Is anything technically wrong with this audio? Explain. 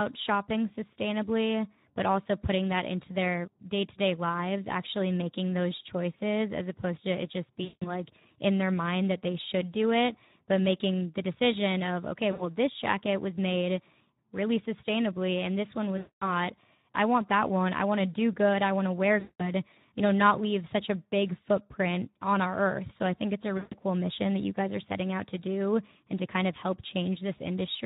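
Yes. Two faults are audible in this speech clip.

Speex codec damage runs through the whole recording. The coding sounds like a rate of about 11 kbps, too few bits to describe the excitation signal well. The voice therefore comes out noisy and hoarse. Frequency-domain codecs tend to smear into swirling, watery artefacts. This grit instead sits in the voicing itself, as a CELP coder short of excitation bits would produce.

VoIP packet loss concealed by the speech codec occurs five times: 7.63 to 7.88 s (about 180 ms), 12.31 to 12.43 s (80 ms), 15.98 to 16.23 s after "sustainably and this one" (240 ms), 19.20 to 19.51 s between "I want to wear" and "you know not leave" (200 ms), and 23.57 to 23.76 s between "I think it's a" and "cool mission that you" (140 ms). Each lines up with a run of lost 20 ms frames. The decoder repeats its last pitch and filter, so the sound stretches into a buzzy tone or coloured noise that fades. 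A bare dropout would leave silence or a click instead.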